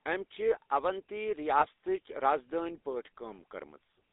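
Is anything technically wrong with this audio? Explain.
Yes. Throughout, the speech has passed through the GSM full-rate codec, which models the vocal tract with coarse pulse excitation and limits the band to about 300 Hz to 3.7 kHz, leaving a plainly audible buzzy, gravelly roughness.

From 1.60 to 1.66 s there are lost GSM frames. The decoder repeats the last good frame, producing a brief, rough metallic ring that points to a single dropped 20 ms frame.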